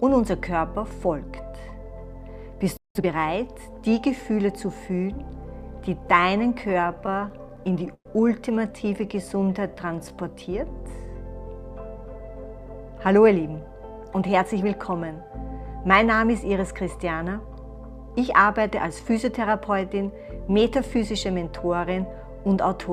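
The audio runs through five distinct delivery problems, all in the first 15 seconds. The first is a playback stall: at 2.77 s the sound just stops dead and stays silent for about 180 ms, until 2.95 s. That kind of hole in the middle of continuous sound is most likely the player running out of data or having its thread held up, so nothing reached the output until it recovered. Right after that, from 2.95 s to 3.13 s, comes time-compressed catch-up. The player clears the backlog the stall left behind by snipping out small pieces and cross-fading across them, so that short stretch plays at twice normal speed. The pitch doesn't move, but it sounds rushed. Next, between 6.61 s and 8.07 s, there's a repeated stalls (stutter) stretch. The sound keeps catching and hanging, sixteen times in about a second and a half, because packets were arriving late or too slowly and the jitter buffer kept draining. 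Each gap gets papered over by stretching the last sound, with the longest hang around 112 ms and roughly a quarter second filled in overall. Nothing is actually lost, but it drags and stammers. From 9.06 s to 10.10 s you get a jitter buffer slow-down. The receiver was building up a reserve by repeating single pitch periods and slivers of pause over and over, adding about 142 ms. Playback drops to about 87% speed with the pitch unchanged, so sounds come out drawn out. Finally, from 11.98 s to 14.62 s there's a jitter buffer speed-up, which is the opposite move. The buffer was holding more than its target, which fits a bunch of delayed packets landing together. To trim the latency the receiver cut out short bits a pitch period or a few at a time, around a fifth of a second in total. That runs the audio at about 107% speed, still at normal pitch, and it comes across as slightly hurried.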